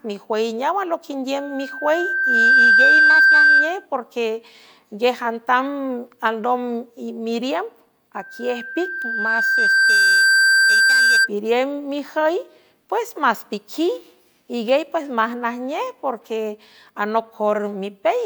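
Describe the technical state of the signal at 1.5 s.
A single tone near 1.6 kHz is swelling into a squeal at that point, part of a loudspeaker feedback squeal running from 1.36 s to 3.86 s. It builds over roughly a second to about 10 dB above the speech. The microphone is picking up its own loudspeaker, and the loop gain exceeds unity at that frequency.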